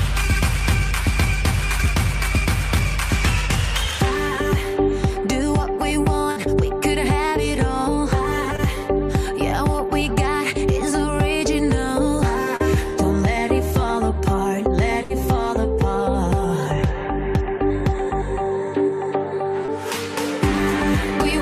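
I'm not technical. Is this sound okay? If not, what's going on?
No. Twice, at 6.31 to 6.38 s and 15.04 to 15.12 s, there is a burst of packet loss. Several pieces of the sound arrived too late to play, so the receiver stretched out the last bit and faded it, and a brief slice goes missing.

Three smaller moments, at 8.56 s, 12.56 s and 19.66 s, are short concealed packet loss. A few hundredths of a second never arrived, and the receiver patched each hole with an imitation of what came just before, leaving a quick smear or wobble.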